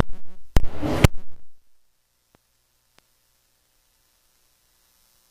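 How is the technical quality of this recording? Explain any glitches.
Nothing stood out on listening; no glitches were heard anywhere in the recording.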